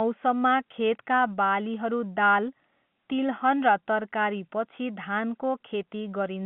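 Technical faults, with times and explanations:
No technical faults can be heard anywhere in this speech.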